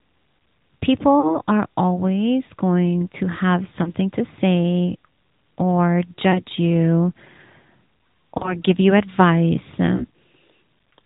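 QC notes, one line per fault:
Throughout: AMR narrowband mobile codec. Speech is squeezed through an 8 kHz vocal-tract model, which fits a rate around 10.2 kbps, so nothing passes above 4 kHz and the voice sounds plainly buzzy and synthetic.
1.20–1.39 s, 3.84–3.92 s, 6.32–6.43 s, 8.38–8.61 s, 9.96–10.06 s: lost AMR speech frames. Corrupted frames were concealed by repeating the last pitch and vocal-tract settings at falling gain. The voice briefly smears, warbles and dips before "are always going to", between "always going to have" and "to say or", and before "you advice". Each gap lasts 20 to 40 ms, which points to one or two missing 20 ms frames.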